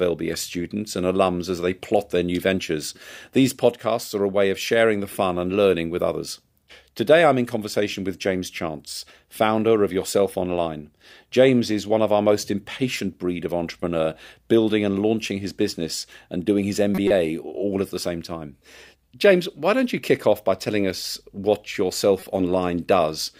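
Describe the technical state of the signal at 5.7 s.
At 5.7 s the speech signal is intact, with no audible technical fault.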